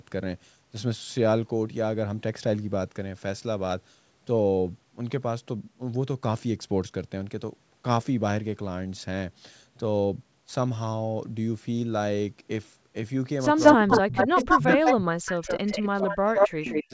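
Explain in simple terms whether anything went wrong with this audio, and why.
Yes, two things go wrong near the end. From 13.57 to 14.95 s, and again at 15.27–16.17 s, 16.36–16.49 s and 16.65–16.81 s, a delayed copy of the sound trails about 0.18 s behind. That is echo leak, likely from a loudspeaker whose echo canceller let some of the far side's audio slip back.

Overlapping this, from 13.73 to 15.6 s and from 15.86 s to the end, the main sound dips steeply and cuts out in pieces. This is speech suppressed in double talk, likely because both sides spoke at once and the canceller turned everything down.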